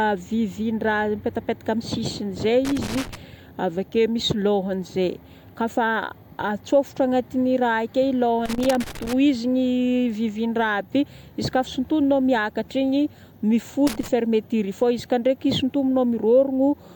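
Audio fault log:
2.65–3.15 s, 8.46–9.13 s, 13.87–14.08 s: loose connector crackle. Irregular scratchy bursts cut through the speech. A faulty contact keeps breaking the signal, chopping it into clicks and pops.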